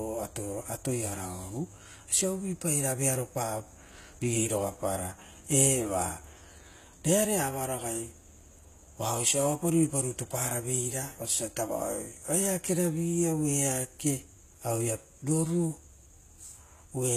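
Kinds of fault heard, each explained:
HE-AAC compression: speech treble plainly damaged, likely rebuilt from copied lower bands at a low bitrate near 20 kbps; spectrogram shows patchy highs cut off near 14.9 kHz.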